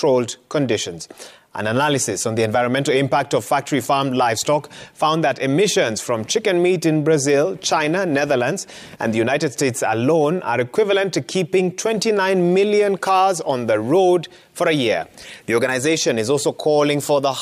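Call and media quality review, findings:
No faults found. Nothing in the audio calls for a ticket entry.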